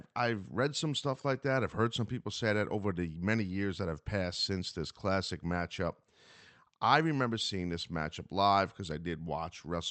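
Nothing goes wrong here at all: the speech simply comes over an ordinary Opus call link, with the top end tapering off around 8 kHz as that kind of connection does.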